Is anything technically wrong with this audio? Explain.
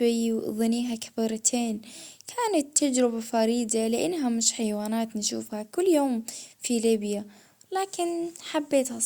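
Nope, nothing technically wrong stands out here, and this bit of speech comes across just fine as it is.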